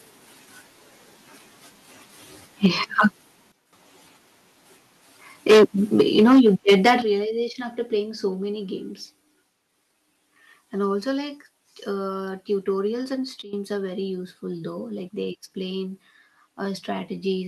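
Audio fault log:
2.64–2.67 s, 2.99–3.06 s, 5.49–5.64 s, 5.99–6.94 s, microphone overload: loud peaks crackle harshly, driven about 4, 3, 12 and 7 dB past full scale. Around 10%, 3%, half and 7% of samples are clipped, the last run ending just before "realization after playing so". On the waveform the peaks are flattened, and on the spectrogram there are broadband vertical smears. The likely cause is input volume set too high for the converter.
2.66 s, 6.01 s, 7.02 s, microphone volume stepped down: voice and background drop together in single steps of about 4, 5 and 9 dB. The last comes just before "realization after playing so". This is likely the call software cutting the device input after detecting clipping. The waveform envelope shrinks abruptly, and the spectrogram darkens evenly across all frequencies.
3.52–3.73 s and 13.42–13.53 s, sudden gain jump: sound and background noise fall together by about 12 dB, then about 15 dB, the second just after "tutorials and". 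The change is instant rather than ramped, likely a digital gain step applied between adjacent samples. The waveform shows a sharp amplitude step.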